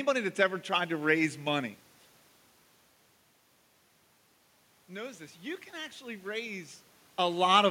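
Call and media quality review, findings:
Automatic gain rising, 4.87 to 6.75 s: input level drops about 14 dB, AGC ramps gain up about 5 dB over nearly two seconds. Waveform envelope climbs gradually; spectrogram shows the room noise floor brightening along with speech, not just the voice.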